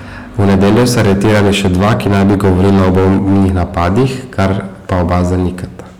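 Hard clipping runs through the whole speech clip: driven about 16 dB too hot, roughly a fifth of samples hit the limit, giving flat-topped waveforms, smeared high harmonics and harsh fuzz.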